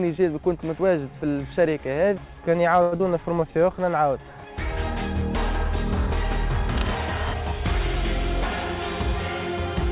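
The audio passed through a narrowband call link, with nothing above 4 kHz, which fits a G.711 A-law codec. At 2.82 s a short stall from a late packet holds the current sound for about 98 ms until 2.94 s. Nothing is lost, but the sound drags with a slight buzz or dip. At 3.0 s a short concealed packet loss follows. About 60 ms of audio never arrives, and only a brief synthetic fill bridges the gap, so the sound smears and jumps ahead. From 3.34 to 3.85 s a jitter buffer slow-down repeats small pieces of the signal. Playback runs at 91% speed at unchanged pitch, adding 52 ms and drawing sounds out. From 6.64 to 6.99 s cable scratch noise adds rough, uneven crackle about 10 dB below the signal. A worn cable or connector being moved is the likely cause.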